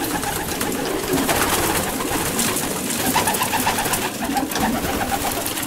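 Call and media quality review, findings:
Doubled audio track, 2.10–4.06 s. Second full-band copy trails the original by about half a second, roughly 5 dB quieter, with no decay or room colour. Starts and stops abruptly. Likely cause: capture via a second, slower path or an edit leaving two out-of-step copies mixed together.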